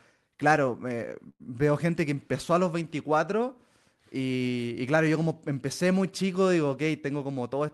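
At 1.29 s the speech stalls for about 0.12 s, right before "gente que empezó a". That's a call audio freeze, most likely packets held up on the way so the jitter buffer ran dry. The receiver stretches out the last bit of sound as a short fading buzz or hiss, then about 40 ms of silence, before things pick up exactly where they left off. Nothing gets lost, but the rest of the clip now runs roughly 103 ms later.

Near the end, from 6.99 to 7.61 s, just after "muy chico digo ok", you get a jitter buffer speed-up. The buffer was holding more audio than it wants, so the receiver trimmed out lots of tiny pitch-period-sized slices in a row, about 70 ms in total. The speech runs at around 109% speed with its pitch unchanged, so it comes across as hurried. All of this sits on top of the usual Opus call coding, which tops out around 12 kHz.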